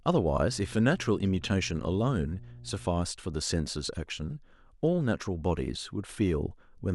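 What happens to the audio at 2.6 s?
A steady 60 Hz drone sits roughly 20 dB below the speech from 0.50 to 2.88 s. This is mains hum, power-line interference coupled in through a ground loop or transformer.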